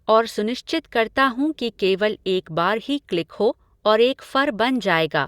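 No technical faults can be heard in this speech recording. There is nothing in the audio that calls for a timestamp or a fix.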